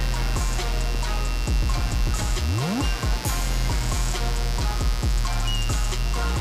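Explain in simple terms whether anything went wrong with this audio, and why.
A steady, raspy buzz runs under the whole recording, fairly loud. This is mains buzz: electrical interference from the 60 Hz power supply leaking into the audio.

At 0.95 s there is a tiny tick. That is a block of digital silence, a gap of about 1.3 ms where the sound drops out, likely because the program didn't deliver audio in time.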